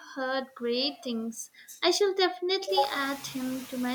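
A noise suppressor runs across the whole clip, judging band by band and frame by frame what counts as steady background and pulling it down by about 8 dB. These are noise suppressor artifacts: the background sinks in the gaps between words and swells back up underneath the speech, so the floor pumps with the talking. The effect is easiest to hear after the room noise itself climbs by about 14 dB at around two and a half seconds, where it still sits about 20 dB below the speech.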